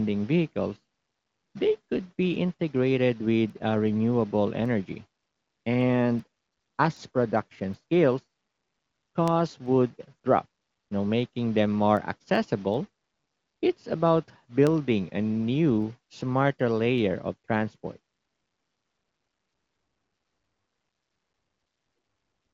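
Word clock ticks run from 0.42 s to 22.37 s, about every 0.4 s, some fifty in all. The receiving device ran on its own clock, roughly 50 ppm off the sender's. Each time the clocks slid past each other, one sample was dropped or repeated, leaving a steady ticking under the speech.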